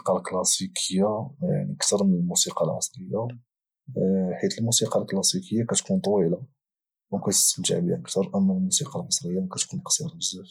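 Listening through the speech, nothing stood out as a technical problem at any point.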